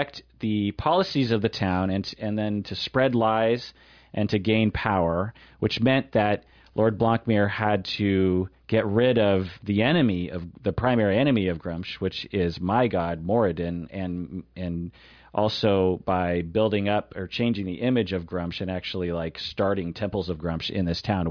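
A speech recording with nothing technically wrong to report.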